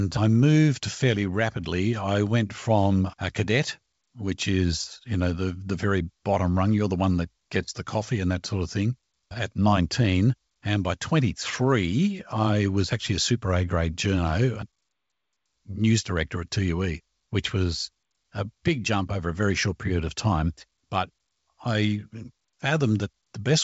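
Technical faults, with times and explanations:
Nothing here counts as a technical fault; the speech comes over G.722 wideband telephone coding at what sounds like the full 64 kbit/s, reaching up to about 7.7 kHz with at most a faint trace of the coding.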